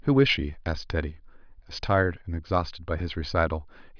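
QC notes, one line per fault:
No faults detected.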